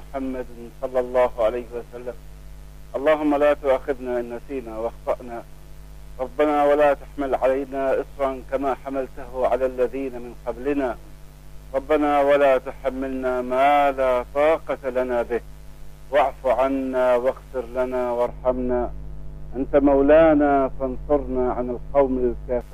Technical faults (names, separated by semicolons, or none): de-emphasis applied wrongly